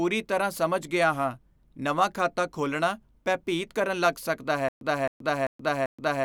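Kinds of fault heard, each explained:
Stutter with silent gaps: playback likely stalled near the end, and at each retry it replayed the last fragment it still held, then ran dry. From 4.69 s to the end of the clip, the same 265 ms burst of speech sounds four times, each followed by 127 ms of dead digital silence, so the repeat lands every 391 ms. The speech that should have continued over those final seconds never arrives.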